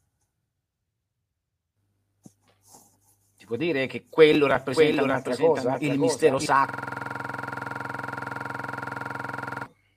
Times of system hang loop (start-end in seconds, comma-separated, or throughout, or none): 6.69-9.66